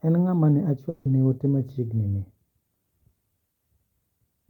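From 0.89 to 1.07 s the speech smears into a fading buzz, then resumes with 160 ms missing, likely from a long network dropout that the receiver concealed.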